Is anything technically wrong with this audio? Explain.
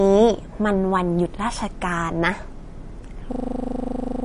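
Yes, there are two faults. Throughout the clip the speech has a watery, swirly quality, with metallic chirping on sibilants and smeared consonant attacks. Nothing is present above 10.6 kHz, so the top end sounds dull. This is plainly audible MP3 compression, likely at a bitrate around 40 kbps. At that rate the encoder runs short of bits, so weak frequency lines drop in and out from frame to frame, and it cuts off the treble above a fixed frequency.

From 3.32 s to 4.24 s the sound turns into a rapid mechanical rattle, one 40 ms fragment repeating exactly at 25 Hz until the clip ends. This is a system hang loop. The computer or driver froze while the sound hardware kept replaying the same short stretch of its buffer, so about a second of audio is lost and replaced by that repeating fragment.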